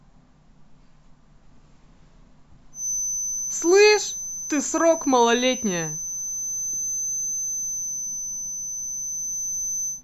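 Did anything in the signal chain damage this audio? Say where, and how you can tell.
Yes. A steady 6.1 kHz feedback whistle runs from 2.71 s onward, about 10 dB under the speech. Likely a speaker-to-microphone loop held near oscillation.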